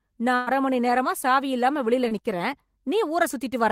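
From 0.35 to 0.49 s there is a burst of packet loss, just before "அரை மணி நேரமா சாவி". About 120 ms of the conversation never arrived in time, so the receiver stretched the last received sound across roughly 110 ms, letting it decay before the stream resumed further on. It sounds like a held, dimming smear followed by a jump. On a spectrogram the frequency content runs flat and unchanging, then fades. The waveform envelope tapers smoothly before snapping back.

At 2.09 to 2.13 s, right after "நேரமா சாவி இல்லாம வெளியில", a short concealed packet loss appears. About 20 ms went missing, and the decoder patched it by extending the preceding sound, then crossfaded into the real audio. It is heard as a brief smear or wobble. A spectrogram shows a thin stripe where the partials freeze or blur for a moment. The waveform shows a short stretch where the preceding sound is continued, blending smoothly back at the rejoin.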